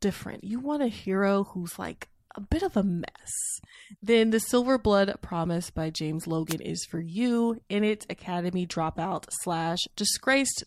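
At 6.47 s a wireless microphone noise hit breaks into the speech and lasts until 6.55 s, roughly 80 ms. The analogue FM radio link fades as reflected signals cancel, so receiver noise surges up in a brief swish of static. Unlike a digital dropout, which leaves silence or a hard gap, this burst is filled with hiss rather than cut to nothing.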